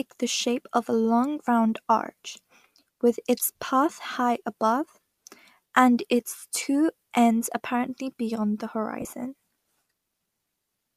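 At 6.39 to 6.42 s, just before "two ends apparently beyond", lost LE Audio frames leave a 30 ms grainy smear as the last spectrum is replayed with scrambled signs. After "ends apparently beyond the", 9.00 to 9.13 s, short losses totalling 60 ms scatter across 120 ms, which fits dropped 7.5 ms frames of the likely LC3 link.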